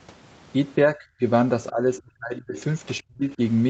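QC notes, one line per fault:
0.87–1.22 s, 1.71–2.56 s, 3.01–3.40 s, speech suppressed in double talk: the speech sinks in level, most likely because the echo canceller mistook overlapping far-end talk for echo and turned both down. The first dip is shallow, about 15 dB over roughly 0.2 s. The second is about 35 dB across roughly 0.7 s. The third goes nearly silent, about 40 dB down, for roughly 0.3 s. The 8 kHz ceiling comes from the call codec.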